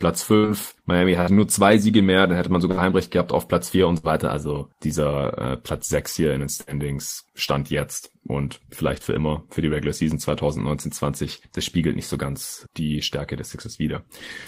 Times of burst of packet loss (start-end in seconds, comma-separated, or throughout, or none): 0.37-0.46, 1.21-1.30, 2.71-2.80, 3.97-4.06, 6.61-6.70